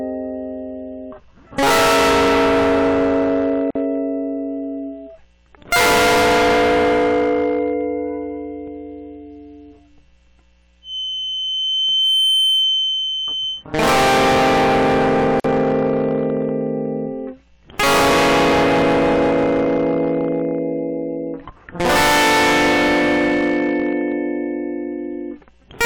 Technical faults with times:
0.00-25.86 hard clipping
3.70-3.75 gap at a join of encoded pieces
10.81-13.65 feedback whistle
15.40-15.44 gap at a join of encoded pieces

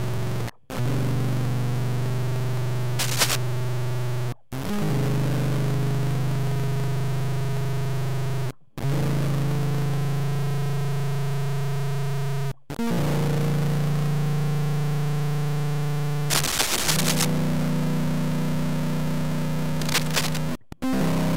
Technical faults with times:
0.00-21.36 stuck bit

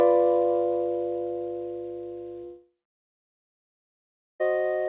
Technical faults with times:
2.44-4.43 long network dropout

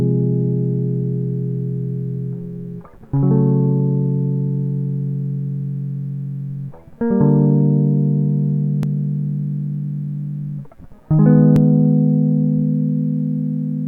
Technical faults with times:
8.83 dropped buffer (overrun)
11.56 dropped buffer (overrun)

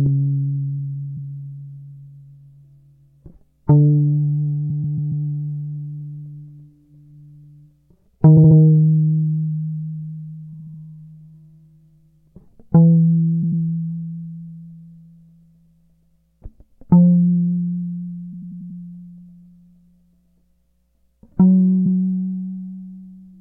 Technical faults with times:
1.16-1.21 repeated frames
4.69-5.25 repeated frames
8.36-8.57 repeated frames
10.52-10.80 repeated frames
13.42-13.61 repeated frames
18.32-18.79 repeated frames
21.85-21.97 repeated frames

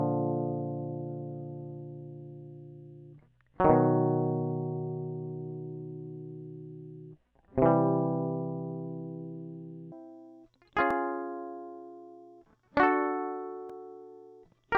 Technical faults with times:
9.92-14.78 wrong sample rate

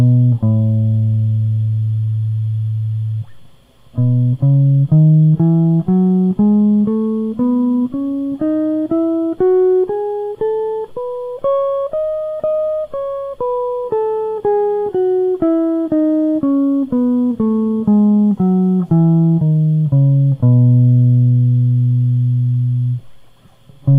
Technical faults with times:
none

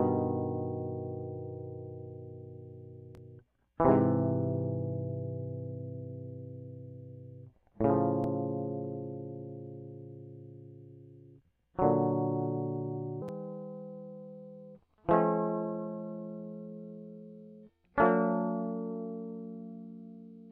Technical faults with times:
13.22-20.51 wrong sample rate

